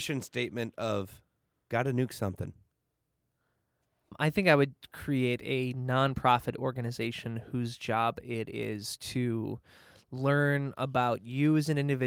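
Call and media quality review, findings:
No faults found in recording.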